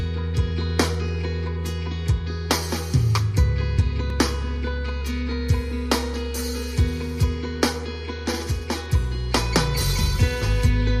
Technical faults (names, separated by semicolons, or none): block of digital silence